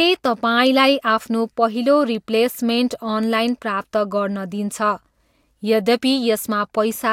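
Speech recording with no audible technical faults anywhere.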